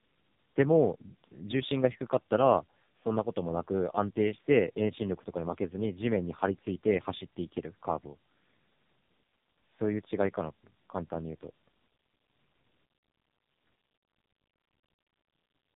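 Tandem speech coding runs throughout: decoded and re-encoded through two low-rate speech coders, the speech is rougher, warblier and more muffled than one codec alone, with nothing above 3.8 kHz.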